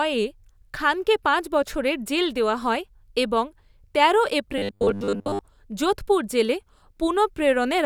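From 4.58 to 5.41 s, the speech becomes a rigid, metallic 100 Hz buzz. It is robotic sound, likely from 10 ms buffers repeated over most real audio.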